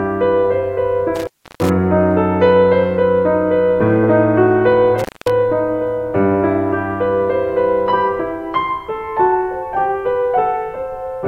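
Music plays until 1.16 s, when an intermittent contact breaks the signal: a loose plug or cable connection opens, and the audio drops out for about 330 ms, with crackle as the contact makes and breaks, until 1.70 s. It happens again from 4.99 s to 5.30 s, open for about 220 ms. On a waveform each gap is a near-flat stretch framed by sharp spikes, and a spectrogram shows broadband vertical streaks at the edges with almost nothing between them.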